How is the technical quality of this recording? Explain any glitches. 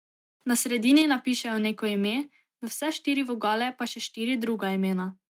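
The recording has two linked glitches close together, both around one second in.

From 0.88 to 1.02 s there is microphone overload. The loudest peaks sound flattened and harsh, with a crackling edge. The likely cause is an input level set too high. The signal was pushing about 3 dB past the converter's ceiling, so the tops of the waveform were sliced off. A few percent of the samples in that stretch hit the limit, and the squared-off peaks add that gritty distortion.

At 1.02 s the microphone volume steps down. The voice and the background both drop abruptly by about 4 dB, in a single step rather than a fade. This is likely the call software reacting to the clipping just before it, cutting the device's input gain at once. The result is an audible dip in level right after the distorted peak.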